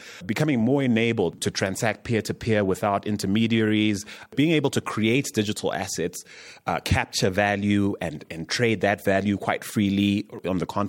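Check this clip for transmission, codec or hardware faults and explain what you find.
I find no faults to explain in this clip.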